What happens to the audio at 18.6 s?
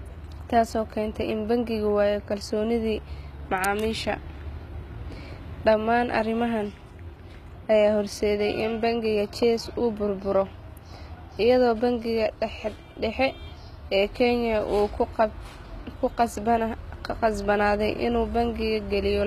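At 18.6 s the speech carries the same damage heard across the whole clip: sibilants turn gritty and metallic or lisping, the treble sounds synthetic, and nothing remains above about 14.9 kHz. This is likely HE-AAC compression at a low rate, consistent with roughly 20 kbps. The codec keeps only the lower spectrum and fakes the top by copying lower bands upward under a coarse envelope, so the rebuilt harmonics no longer match.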